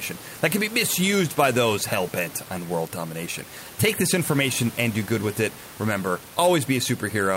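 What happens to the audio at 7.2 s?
At 7.2 s the audio is intact, with only the room noise, about 17 dB below the speech, underneath it.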